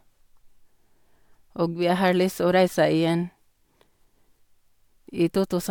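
No technical faults are audible.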